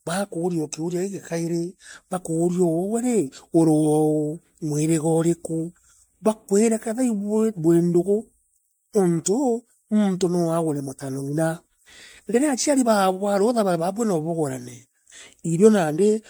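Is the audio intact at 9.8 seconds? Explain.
No. At 9.8 s the speech carries generation loss across the whole clip, likely from about five rounds of MP3 coding that fits 96 kbit/s, each re-quantising on a shifted frame grid. Unlike a single low-bitrate pass, the swirl, hollowness and blurred attacks are heavier than the bitrate explains, though content still reaches 20.1 kHz.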